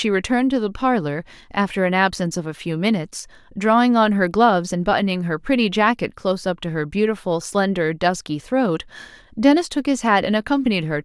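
Nothing technically wrong turns up anywhere in this speech recording, so there's no problem to pin down here.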